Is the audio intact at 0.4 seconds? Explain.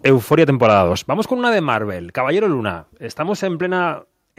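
No. At 0.4 s the speech falls inside microphone overload from 0.05 to 0.82 s. Input gain was likely too high, flattening loud peaks by about 3 dB. They crackle harshly.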